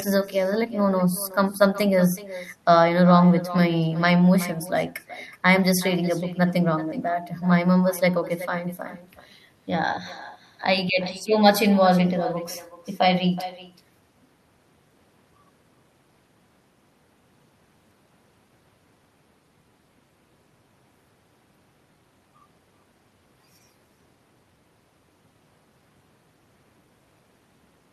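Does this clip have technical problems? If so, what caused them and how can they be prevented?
Yes. Throughout the speech, every phrase is followed around 0.4 s later by a fainter, thinner copy of itself, sitting about 17 dB below the direct sound. This is echo with no canceller: the far end is playing the call through a loudspeaker, its microphone captures that playback, and nothing strips it out before it travels back, so the talker hears themselves after the full network round trip. Prevention means enabling acoustic echo cancellation on the far-end device, or having that participant use a headset instead of a loudspeaker.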